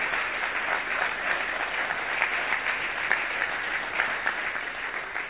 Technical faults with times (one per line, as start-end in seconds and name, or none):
none